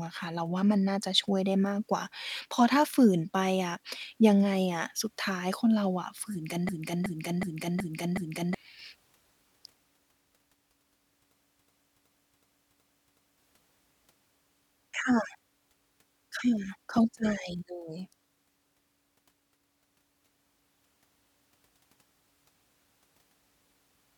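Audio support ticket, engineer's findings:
System hang loop at 6.69–8.55 s and 11.52–13.38 s: 371.52 ms segment repeats five times (2.69 Hz loop rate). Driver stall replaying ring buffer, fits a 16384-sample buffer; about 2 s of speech lost each time.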